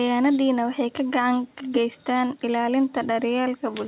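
No faults are audible in this speech; the top end stops at 4 kHz, as expected from a narrowband telephone-style codec on a call path, and the call microphone processing's trim of the lowest bass is normal.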